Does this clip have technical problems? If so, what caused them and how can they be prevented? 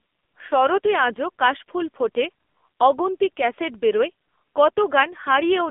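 Yes. The speech passed through the AMR narrowband mobile codec throughout, at a heavily compressed low mode that fits roughly 6.7 kbps. Its pulse-driven vocal-tract model leaves the voice buzzy and synthetic, confined to about 250 Hz to 3.6 kHz, with nothing above 3.7 kHz. Prevent this by recording locally or using a wideband codec at a higher bitrate.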